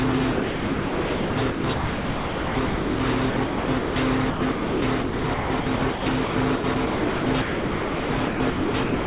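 Sound chopped by the voice detector runs through most of the clip, from 0.32 to 3.0 s, 3.3 to 3.96 s and 4.3 s to the end. The sender's detector most likely kept gating transmission, so about 2.3 s, 0.46 s and 3 s of real sound were swapped for comfort noise. The result is choppy. A waveform shows flat, even low-level noise blocks between genuine bursts, while a spectrogram shows smooth, featureless noise bands where detail vanishes. A hard ceiling at 4 kHz points to the call path's G.711 coding.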